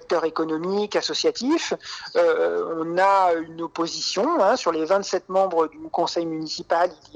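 No technical faults can be heard anywhere here.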